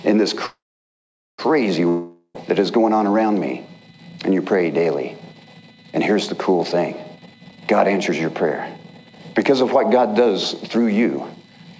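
Packets were likely held up in transit from 0.46 s to 1.40 s, a call audio freeze in which the jitter buffer ran dry. The receiver stretched the last sound into a short fading buzz, then held silence for about 0.81 s of the roughly 0.93 s gap. When the audio resumes it carries on exactly where it stopped, so nothing is lost, but everything after that point now arrives about 0.93 s later than it should.

A long network dropout follows from 1.88 s to 2.37 s, most likely a stretch in which no packets reached the receiver at all. The last sound is extended as a brief decaying hiss, with only about 70 ms of true silence before playback returns. This time the audio picks up further along, skipping about 0.46 s that was never played, so the sound jumps forward across the break rather than simply pausing.

From 7.16 s to 11.74 s a jitter buffer speed-up is at work. The buffer had built up more audio than its target, so the receiver repeatedly cut out small pieces one or a few pitch periods long, removing about a second in total. 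Playback runs at about 119% speed with the pitch unchanged, which makes the passage sound hurried and rushed. Across the whole clip, nothing is heard above 8 kHz, which fits a wideband call codec such as G.722 at 64 kbps.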